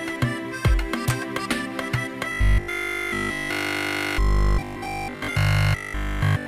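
From 2.32 s to 6.46 s the sound collapses into a rigid, metallic buzz pinned at a steady 50 Hz, keeping only a rough trace of the original movement underneath. This is robotic sound from repeated short buffers, likely caused by fresh audio arriving too seldom, so playback keeps looping a 20 ms slice whose repetition rate sets that 50 Hz pitch. Essentially the whole stretch is repeated material, with the real audio skipped.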